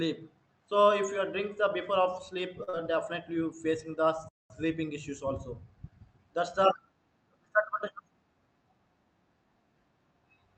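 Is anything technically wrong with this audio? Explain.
Yes, there are three faults in this speech, two of them back to back.

Short stall from a late packet, 2.63 to 2.69 s: a packet arrived late and the jitter buffer emptied, so the receiver stretched the preceding sound by about 40 ms, then resumed where it left off. Nothing is lost, but the sound hangs briefly with a faint buzz or dip, and playback now runs about 40 ms later.

Short concealed packet loss, 2.69 to 2.75 s: right after the stall, about 40 ms of audio never reached the decoder. The receiver filled roughly 36 ms by extending the last sound before blending back, so this stretch smears or wobbles and a short consonant may disappear.

Playback stall, 4.29 to 4.50 s: the speech cuts to silence mid-flow for about 213 ms before continuing. The likely cause is the player running out of data or its output thread being blocked until it recovered.

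The audio passed through a call path whose sound fits an Opus codec at around 32 kbps, with content limited to about 8 kHz.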